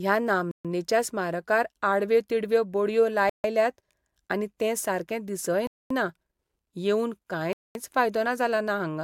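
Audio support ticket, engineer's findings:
Bluetooth stall, four dropouts: 0.51 s (about 130 ms, before "स्मारकार आडव्यो तिडव्यो बडयो"), 3.29 s (about 150 ms, after it), 5.67 s (about 230 ms, after "आनी तें सारकें दिसय"), 7.53 s (about 220 ms). Speech cuts to silence, then resumes. Likely wireless link: resends delayed packets, receiver buffer emptied.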